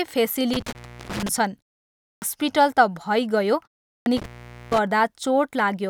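Intermittent contact first appears in this speech recording between 0.53 and 1.29 s, and again between 4.17 and 4.78 s. A loose plug or cable conductor briefly loses contact, so the speech drops out with crackle at both edges. The line stays open for about 370 ms in the first event and about 460 ms in the second, leaving faint hiss where the signal should be. Inside the first event, at 0.73 to 0.75 s, a separate hole of about 21 ms cuts out, and the speech resumes as though it had kept playing underneath. The likely cause is a Bluetooth dropout, where audio packets reach the headphones too late and are discarded, and a gap this short fits a single lost packet. A clipped start after a pause occurs at 2.13 s and at 3.97 s. In both places the output device has gone to sleep during the silence before, which lasts 0.59 s and 0.38 s. It takes about 90 ms to wake and lock again, so the opening of the next phrase is swallowed and the speech jumps in abruptly, missing its first sounds.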